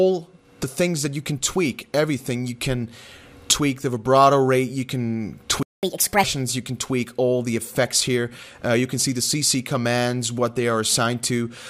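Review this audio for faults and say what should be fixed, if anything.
There is a playback stall at 5.63 s. The sound stops in mid-flow and stays silent until 5.83 s, a gap of about 200 ms. It then resumes. The likely cause is that the player ran dry of data or its audio thread was blocked, so nothing reached the output for that time. Preventing this needs a deeper playback buffer and an audio thread that nothing else can block.

Catch-up at higher speed follows straight away, from 5.83 to 6.23 s. For that stretch the audio runs at 1.5 times normal speed. The pitch jumps up by about seven semitones. This is the player resampling its backlog to win back the time lost in the stall. At 6.23 s speed and pitch drop back to normal. Preventing this means recovering without audible resampling, for example with time-stretching that keeps pitch.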